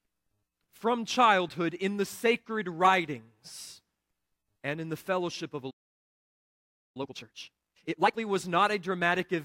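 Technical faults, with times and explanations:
5.70–6.97 s, playback stall: right after "the fellowship of a" the speech cuts off mid-flow and the output falls silent for about 1.25 s. This is likely the player running out of buffered data or having its output thread blocked, so nothing reaches the output until it recovers.
6.97–8.21 s, time-compressed catch-up: the speech resumes hurried at 2.0 times normal speed with unchanged pitch. The player is clearing its backlog by cutting out short segments and cross-fading the remainder, which shortens timing without resampling.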